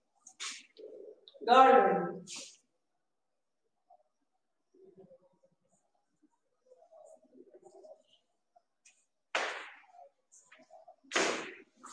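Nothing in the audio stands out as a technical fault at any point, so there's nothing to flag here.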